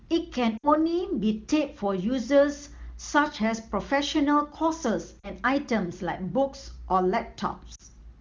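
At 0.57 to 0.70 s the speech briefly drags and thins. It happens again at 5.19 to 5.29 s and at 7.75 to 7.82 s. These are lost AMR speech frames. Radio errors corrupted the frames, so the decoder repeated the last good pitch and vocal tract settings at falling gain. The first gap lasts about 60 ms, which fits three 20 ms frames. The later two last 40 ms each.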